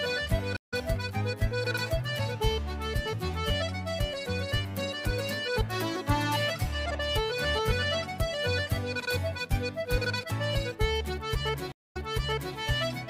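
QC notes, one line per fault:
0.56–0.74 s, stream reconnect: about 156 ms of dead air, then the sound picks up roughly a tenth of a second further along. The link dropped, the player came back with a fresh decoder and rejoined live, skipping what went by.
11.72–12.55 s, stream reconnect: a 233 ms gap, then the audio jumps back 601 ms and you hear that stretch again. After reconnecting, the server resent a burst, so the new decoder started earlier than where playback cut out.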